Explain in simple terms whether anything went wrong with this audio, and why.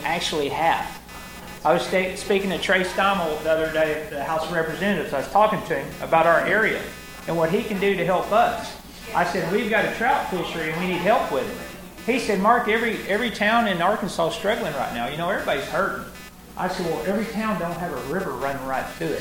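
Yes, there's computer activity noise throughout: a buzzy chirping, pulsing around 300 times a second, from the computer's busy circuits leaking into the audio ground.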